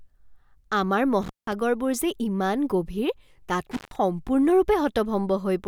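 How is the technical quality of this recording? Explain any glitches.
The recording is marred by two brief dropouts caused by an intermittent contact, at 1.22 to 1.53 s and 3.71 to 3.96 s. In each, a loose cable or plug momentarily opens the signal path. The audio cuts out for about 180 ms and 146 ms respectively, with crackle at both edges and faint hiss filling the gap.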